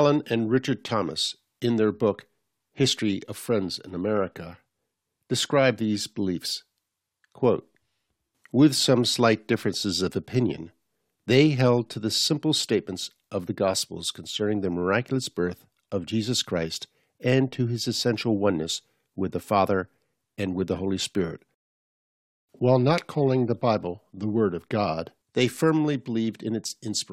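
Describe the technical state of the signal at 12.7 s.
At 12.7 s the speech signal is intact, with no audible dropout, distortion, clipping or other fault at that moment.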